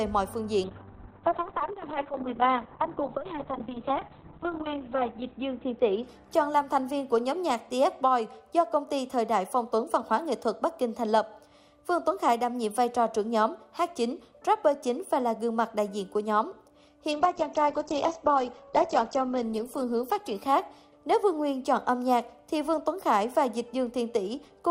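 Call bitrate drops at 0.65–8.35 s and 17.13–22.97 s: the encoder, starved of bits (which fits a fall to about 6 and 10 kbps), codes coarsely and cuts the top end near 4 kHz, then 8 kHz, leaving the audio muffled and rough.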